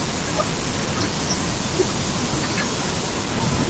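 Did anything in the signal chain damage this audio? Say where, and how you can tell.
No, nothing in the chain damaged this speech: the call microphone processing and the WebRTC call path both behave as designed, and the band stopping at 8 kHz is the expected bandwidth of that call codec, not a defect.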